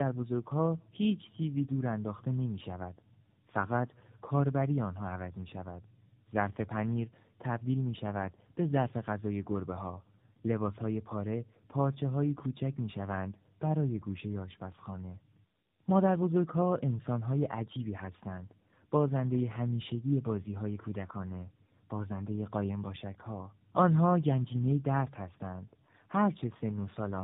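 It's a speech clip with tandem speech coding throughout: rough, muffled, warbly, cut off above 3.7 kHz, which fits two low-rate speech coders in a row, such as G.729A then AMR-NB.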